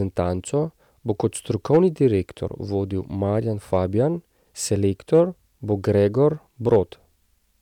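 A stage in the chain overloaded, so speech peaks were sliced flat: hard clipping at 1.73–2.06 s and 6.73–6.78 s (about 3 dB over), and 3.73–3.76 s and 5.14–5.20 s (about 1 dB). The flattened tops add high harmonics, heard as brief crackly grit.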